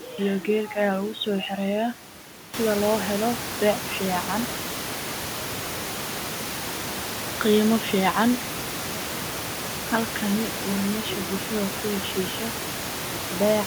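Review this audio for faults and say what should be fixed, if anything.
Nothing to fix: the room's own background noise sits about 41 dB below the speech until around two and a half seconds in, then rises by about 14 dB to roughly 10 dB below it, which is part of the recording environment rather than anything the system did.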